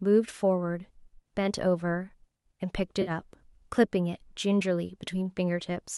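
AAC frame loss with concealment occurs from 3.02 to 3.11 s. About 50 ms of coded audio went missing, which fits a run of roughly five short frames from a low-delay AAC stream, likely AAC-ELD. The decoder bridged the gap by reusing the last intact spectrum, so instead of a clean dropout the speech briefly turns smeared, noisy or phasey, before normal decoding resumes.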